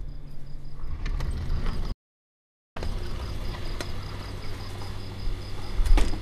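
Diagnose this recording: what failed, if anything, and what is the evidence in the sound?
Reception failed first: a digital broadcast dropout. At 1.92 s the sound fades out in about 3 ms and stays silent until 2.77 s, so roughly 0.84 s of programme is simply gone. That fits the receiver muting on a run of several dozen corrupted frames, then resuming on good data.

Then at 3.52 s there's a small jump in the sound and no gap, where a few milliseconds have vanished. That's most likely a dropped buffer (overrun) at the driver or buffer stage: the samples weren't collected in time, were overwritten, and the remaining audio was spliced straight together.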